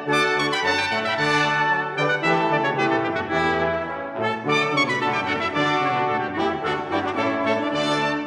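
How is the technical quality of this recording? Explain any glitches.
The technical quality holds up, with no glitches to explain anywhere in the recording.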